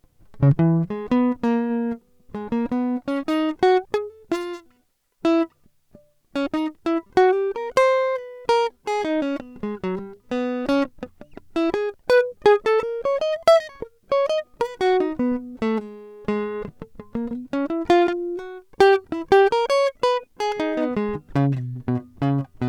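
Nothing technically wrong turns up anywhere in this music clip, so there are no times or causes to point to.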